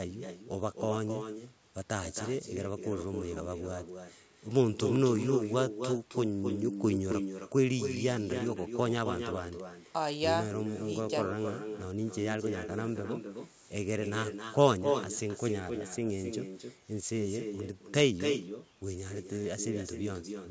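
Speech throughout is trailed by a quieter, thinner copy roughly a third of a second behind, only about 6 dB down. This is echo with no canceller: the far end's loudspeaker feeds its microphone, returning the talker over the network round trip.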